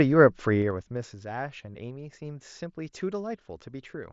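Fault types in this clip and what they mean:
zipper noise: between 0.58 and 1.17 s the level falls by roughly 15 dB in unsmoothed steps of about 2 dB, some ten a second, each leaving a small click. Unlike a smooth fade, a ticking rides on the speech only while the level moves.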